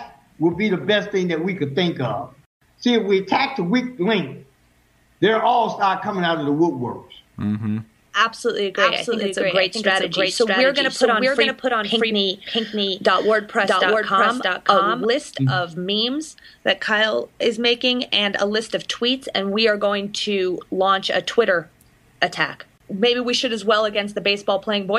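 A doubled audio track runs from 8.77 s to 15.05 s. A second full-band copy of the sound trails the original by roughly 0.7 s at about the same loudness, and it cuts in and out abruptly at those times. Unlike an echo or reverb, it is a single clean repeat with no decay tail and no added room colour. This is likely caused by the sound being captured twice through a slower second path, or by two misaligned copies left in an edit.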